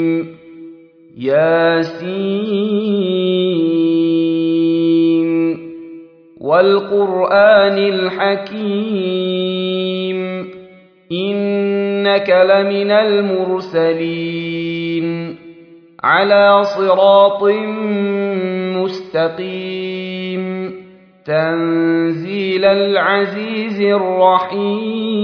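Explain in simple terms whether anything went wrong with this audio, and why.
Nothing went wrong with this audio, because there is no fault to be heard anywhere in it.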